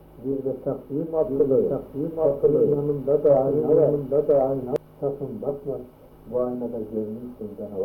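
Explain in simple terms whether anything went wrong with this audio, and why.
From 1.22 to 4.76 seconds there is a doubled audio track: the same sound plays twice, with the second copy about a second behind and roughly as loud as the first. This is likely caused by the audio being picked up a second time through a slower route. Unlike a room echo, the copy doesn't fade away or sound roomy, and it switches on and off abruptly instead of trailing off.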